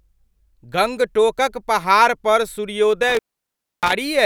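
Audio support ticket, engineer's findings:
Speech dropout with crackle at both edges, faint hiss through the gap, 3.04–3.93 s, right after "गंगटोकक पहाड़पर". Line open about 0.64 s. Intermittent contact: loose cable or plug momentarily breaking the signal path.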